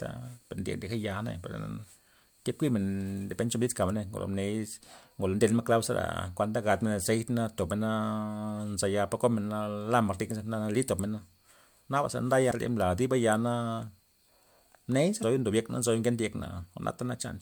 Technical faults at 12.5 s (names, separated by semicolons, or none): damaged data in a compressed stream